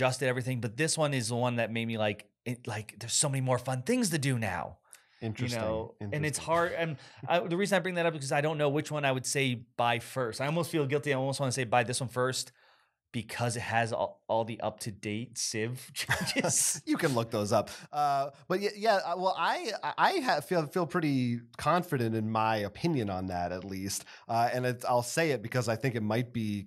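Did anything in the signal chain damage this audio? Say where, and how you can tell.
No, nothing in the signal chain audibly damaged this audio. There is no point in the recording where a stage of the chain can be heard acting on the sound.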